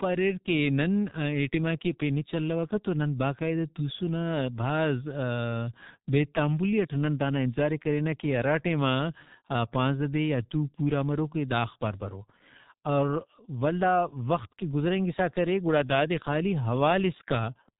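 Across the whole speech clip, the damage of the G.723.1 codec is heavy. Nothing above 3.8 kHz survives, so the speech is muffled. The slowly updated voice model and thin data rate, which fits about 6 kbit/s, make it hoarse and blur consonants.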